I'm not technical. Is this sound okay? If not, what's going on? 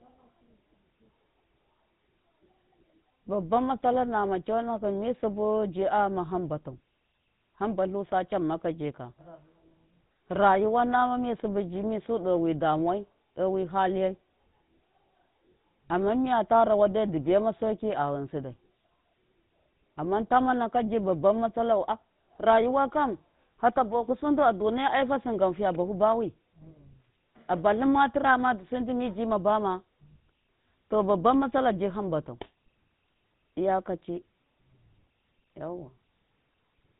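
No. The whole clip has passed through the GSM full-rate codec, the compression used by early mobile phones, and the damage is plainly audible from start to finish. This codec rebuilds the speech from a simplified model of the throat and mouth, driven by a coarse pulse pattern, and it discards everything above 4 kHz. The result is a buzzy, gravelly roughness on the speech and a muffled, phone-like tone with no crisp top end.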